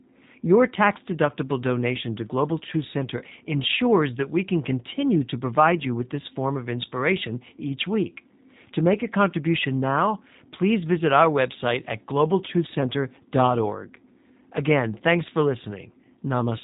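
Speech running through a G.729 codec for its whole length: nothing survives above about 3.8 kHz, and the voice sounds plainly rough and synthetic, rebuilt from a vocal-tract model with sparse pulse excitation. That buzzy, slightly robotic texture, fitting an 8 kbit/s codec, separates it from a clean low-pass filter, which would dull without roughening.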